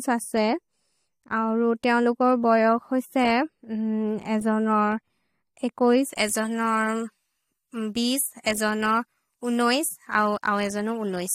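Pre-emphasis left on, from 6.13 s to the end at 11.35 s: a treble boost applied for recording or transmission was never undone by the matching de-emphasis, so the top end stays lifted by about 11 dB at 10 kHz relative to 1 kHz, a tilt that fits a J.17 curve. The speech turns thin and glassy, with sibilants hissing sharply forward and the body of the voice receding behind the brightness.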